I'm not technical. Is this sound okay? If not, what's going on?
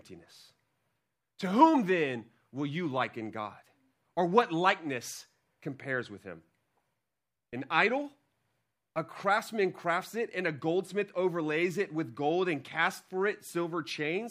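Yes, nothing wrong turns up anywhere in this recording, so there is no fault to report.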